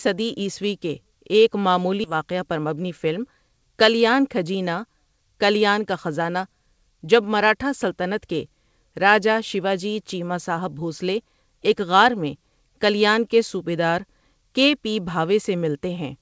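Skip ahead, at 2.04 to 2.06 s, right after "صدی عیسوی کے ایک": roughly 0.7 s of speech never reaches playback, and nothing fills the hole. The speech on either side is butted together almost seamlessly, so the sentence lurches forward and part of it simply vanishes.

Jitter buffer speed-up, from 2.14 to 3.50 s, ending just before "کلیان کھجینا کلیان کا": the receiver is holding too much queued audio and trims it by cutting out tiny pitch-period slices over and over, about a tenth of a second in total. The speech runs at 108% speed with its pitch unchanged, so it sounds briefly rushed. Throughout, the band stops at 8 kHz, which fits a G.722 call codec at 64 kbps.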